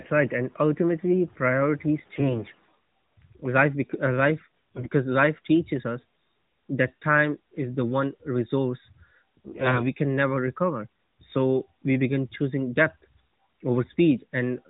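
Flipped bits in the less protected part of the AMR frames, AMR bit errors, strike this narrowband mobile speech recording three times, from 1.98 to 2.56 s, from 4.75 to 4.89 s and from 9.45 to 9.87 s. The corruption is heaviest in the short middle burst and lightest in the first. Misplaced excitation pulses and skewed fine pitch, gain and spectral values leave the voice near its normal pitch and level but turn it hoarse, scratchy and gargly during each burst.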